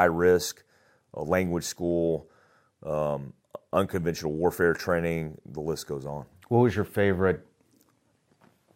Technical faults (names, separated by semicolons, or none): none